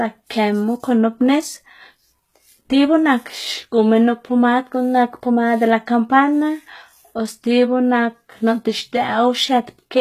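From start to finish the speech has a bright but synthetic top end: s sounds come out gritty and lispy, with a metallic sheen, and nothing reaches above about 14.9 kHz. This is plainly audible HE-AAC compression damage, likely from a low-rate encode, consistent with roughly 20 kbps. The codec keeps only the lower spectrum and rebuilds the treble by copying lower bands upward, so the upper harmonics no longer line up with the real ones.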